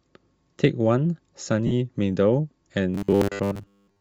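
Bluetooth LC3 compression runs through the whole speech clip, and its damage is plainly audible. The sound has a breathy, grainy edge in the upper range, where a transform codec at a low bitrate has discarded much of the high-frequency detail and filled the gaps with shaped noise instead of the real content. The texture points to LC3 working on 10 ms frames at a low rate, consistent with about 32 kbps, as the likely cause.

Lost LE Audio frames appear from 1.67 to 1.72 s, a gap of about 40 ms, which fits four consecutive 10 ms frames failing to arrive. During the gap the decoder keeps replaying the last spectrum it received with randomised signs, so the speech briefly turns into a noisy smear rather than dropping to silence. The concealment then ends, and normal decoding resumes.

Robotic sound from repeated short buffers starts at 2.95 s and lasts to the end of the clip. Fresh audio is delivered too seldom, so playback fills the time by looping the last short buffer. 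Most of the real signal is skipped. The loops impose a fixed 100 Hz buzz, which fits a 10 ms buffer, and the speech becomes a rigid, metallic drone that only loosely follows its original shape. A buffering stall is the likely cause.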